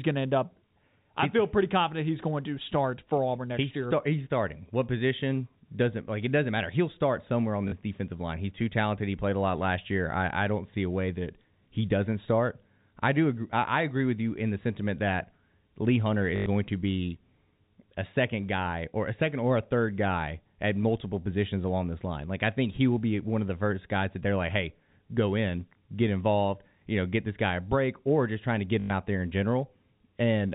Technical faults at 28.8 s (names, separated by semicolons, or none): packet loss with last packet repeated